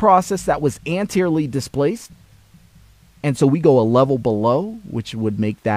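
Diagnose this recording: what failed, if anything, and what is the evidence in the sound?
Nothing failed; the sound gives no evidence of a fault at any stage of the chain.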